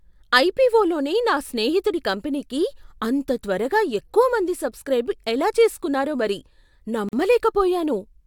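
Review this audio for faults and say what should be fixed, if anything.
There's a gap at a join of encoded pieces in this speech, a short silence of about 44 ms running from 7.09 to 7.13 s. The speech just drops out with smeared edges, then picks up exactly where it left off. That's the signature of two separately encoded chunks butted together, with the encoder's start-up delay and end-of-stream padding left in. To prevent it, trim encoder delay and padding at each join, or encode the whole thing in one pass.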